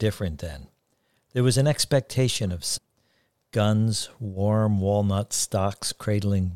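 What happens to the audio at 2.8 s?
At 2.77 to 2.79 s the speech jumps ahead with a small blip, most likely a stream segment skipped: one chunk failed to load and playback resumed at the next.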